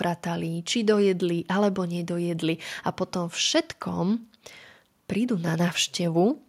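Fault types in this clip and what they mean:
No technical fault can be heard in this speech clip. There is nothing to list for any part of it.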